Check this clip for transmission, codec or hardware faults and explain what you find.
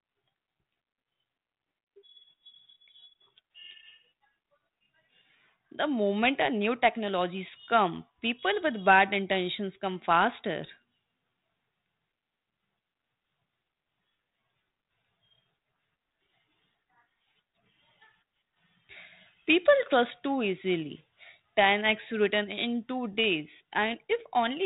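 No faults found: the speech is carried over G.726 ADPCM at 32 kbit/s, limited to 4 kHz as that codec always is, and nothing in it calls for further attention.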